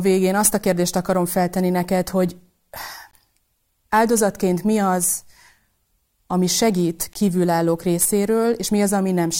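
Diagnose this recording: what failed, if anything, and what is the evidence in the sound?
The failure is at the chunked storage or playback stage, a gap between chunks: 20 ms holes open at 3.11 s and 7.13 s (just after "ami segít"), 4 s apart, one at each chunk join. Waveforms show flat near-silent runs with abrupt edges; spectrograms show full-band blank vertical stripes.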